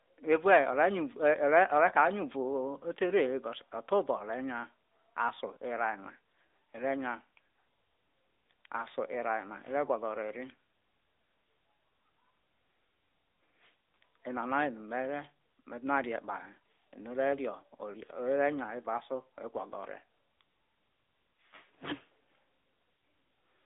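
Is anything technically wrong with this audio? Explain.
Yes. The whole speech clip has passed through an AMR narrowband mobile codec (AMR-NB). The codec resamples to 8 kHz and rebuilds the voice from a vocal-tract model excited by a few pulses per 5 ms subframe. Here the line band runs from about 250 Hz to 3.7 kHz, and nothing above 3.8 kHz survives. The result is thin, muffled and audibly buzzy and synthetic, at a fairly high rate of around 10 kbps. On a spectrogram, energy stops at a flat ceiling near 3.8 kHz, with a cleared region below 250 Hz.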